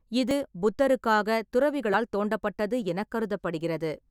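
At 0.31 s, 1.94 s and 2.82 s the speech lurches forward with no gap; about 30 ms, 30 ms and a shorter slice go missing, likely dropped buffers (overrun). Unlike a dropout, which leaves audible silence, these splice the sound straight across.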